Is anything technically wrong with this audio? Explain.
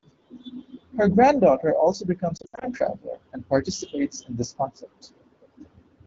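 Yes. From 2.37 to 2.67 s the speech breaks up with lost AMR speech frames. Radio errors corrupted frames, so the AMR-WB decoder, which runs cleanly at 12.65 kbit/s, filled the gaps by reusing the last good pitch and vocal tract settings at falling gain. About 160 ms is missing, scattered over 240 ms. The longest run, 80 ms, drops to near silence within two frames, and shorter losses cause brief warbles. On a spectrogram the harmonics freeze into flat, fading bands, and the waveform shows short envelope dips.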